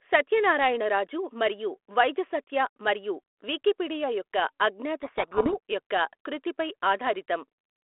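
From 5.02 to 5.54 s, between "మరియు వికీపీడియా యొక్క అజ్ఞాత" and "యొక్క కృతిపై", a codec payload misread buries the speech in harsh distortion: the G.726 code words arrive with their bit order reversed. Unlike a dropout, the sound never goes silent, and unlike low-bitrate rasp, it stops abruptly.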